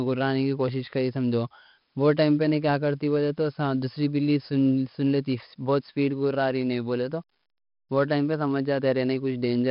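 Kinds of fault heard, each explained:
4-bit ADPCM compression: a heavy, gritty hiss rides on every loud stretch of speech, following its level, and nothing sounds above 5.3 kHz. Each sample is stored as a coarse 4-bit step from a prediction; the dull top fits a sample rate near 11 kHz.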